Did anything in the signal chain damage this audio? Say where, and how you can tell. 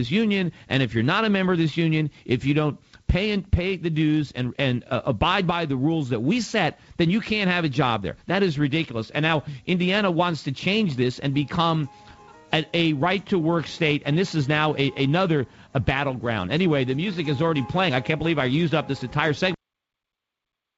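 No, nothing in the signal chain damaged this audio; it came over a call path with nothing above 8 kHz, which fits a G.722 wideband codec at 64 kbps.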